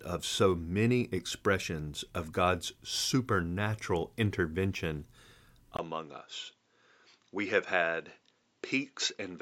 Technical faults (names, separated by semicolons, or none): input switched to a poorer device